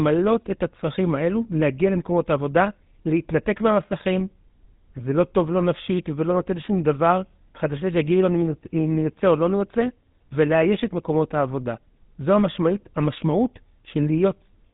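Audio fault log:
Throughout: GSM full-rate codec. The speech has a plainly audible buzzy, gravelly roughness from the pulse-driven vocal-tract model and its coarse excitation, which fits the 13 kbps GSM full-rate coder. Nothing is present above about 3.8 kHz, leaving the sound dull and band-limited.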